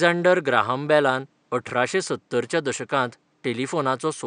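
Speech recording with no technical faults to report.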